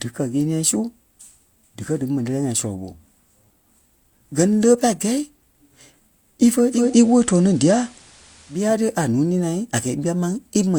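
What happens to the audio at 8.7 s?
At 8.7 s, a faint hiss is ending as the level shifts about 4 dB. This is the digital radio blending to analogue FM from 6.69 to 8.75 s, cross-fading back over 280 ms.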